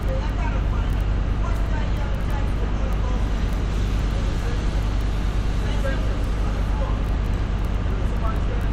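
No technical faults can be heard anywhere in this recording of sounds. Nothing breaks the audio at any point, with no interruption, distortion or dropout disturbing it.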